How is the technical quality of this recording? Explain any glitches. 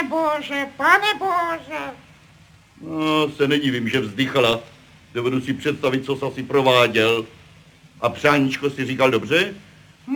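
The recording has one clear flaw, crude rate conversion, present for the whole clip. The sound fits a change from 44.1 kHz to 48 kHz made by simply repeating the nearest sample, with no filtering. Those repeats fall in a regular pattern set by the two rates. That pattern adds shifted, inharmonic copies of the sound, roughly 25 dB below it. The result is a gritty, inharmonic fizz that rides on loud and bright passages.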